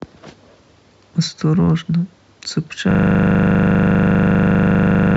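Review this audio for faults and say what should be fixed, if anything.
From 2.91 s to the end, the speech gives way to a system hang loop. The driver stalled while the hardware kept replaying one 40 ms slice of its ring buffer, producing a rigid 25 Hz buzzing stutter that repeats more than fifty times. A waveform shows identical blocks tiling every 40 ms. A spectrogram shows evenly spaced vertical stripes and a frozen spectral pattern. Prevent it by giving the audio thread real-time priority and adding a watchdog that mutes output when the buffer stops being refilled.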